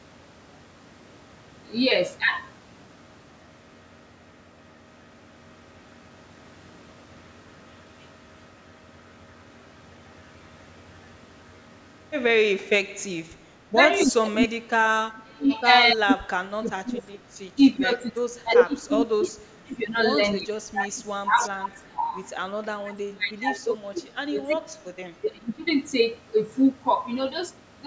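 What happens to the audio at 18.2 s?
Speech suppressed in double talk, 15.93 to 22.17 s: the voice drops by up to about 25 dB in broken patches, likely the echo canceller ducking both sides during overlap. The waveform shows shrunken, gapped stretches.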